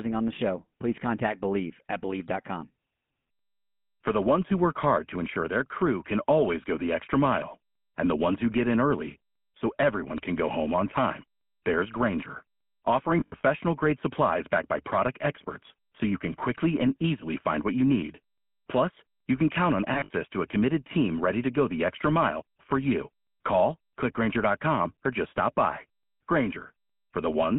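From the start the whole speech clip carries the GSM full-rate codec's signature: a buzzy, gravelly roughness over everything, plainly audible, which fits the 13 kbps full-rate coder. The codec rebuilds the voice from a vocal-tract model fed with a thinned-out pulse excitation, so the fine texture turns coarse. On top of that the phone-line band leaves nothing below 150 Hz or above 3.4 kHz, giving it that boxed-in telephone sound.

From 13.2 to 13.45 s, just before "grade supplies backed by", there's a burst of lost GSM frames. The decoder fills each missing frame by reusing the last good one, so the sound freezes into a short metallic ring instead of going silent. The gaps are scattered across about a quarter of a second, with the longest run under a tenth of a second. The same happens from 19.94 to 20.11 s, between "you can count on" and "to a committed team", again as a brief rough, ringing smear.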